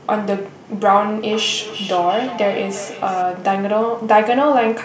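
A speech recording with feedback echo between two devices from 1.32 s to 3.26 s. The speech returns as a delayed copy roughly every 0.4 s, peaking at about 13 dB below the direct speech. The cause is two devices in the same room joined to one call: one device plays back what the other's microphone sent, and that microphone picks it up again. Each device's echo canceller removes only its own playback, so the re-captured sound passes through.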